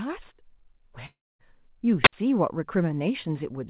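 A long network dropout runs from 1.06 to 1.41 s, likely from packets that never arrived. The receiver stretches the last sound into a fading buzz, which gives way to near silence. Roughly a third of a second of audio is simply gone when sound resumes.

A wireless microphone squelch dropout follows at 2.03 to 2.13 s. The FM radio link weakens, so hiss briefly swells before the receiver's squelch mutes the output for about 62 ms, leaving a short hole, and the sound then returns.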